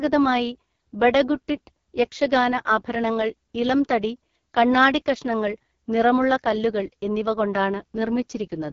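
Speech that sounds rough and raspy from start to finish, with a buzzy, thin texture and no content above 7 kHz. This is heavy AMR wideband (HD Voice) codec damage, which fits its lowest 6.6 kbit/s mode, where the pulse-driven vocal tract model can no longer track the voice cleanly.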